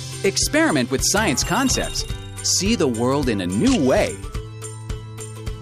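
No technical faults are audible anywhere in this audio.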